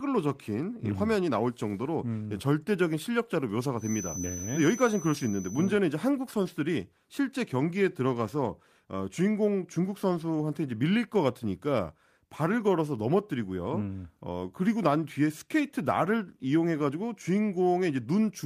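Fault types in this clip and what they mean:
Feedback whistle: a thin, steady 6 kHz tone sits behind the speech from 3.75 to 5.78 s, roughly 15 dB below it, likely from a loudspeaker-to-microphone loop held just short of runaway. A spectrogram shows one narrow horizontal line there, slowly swelling and fading in strength.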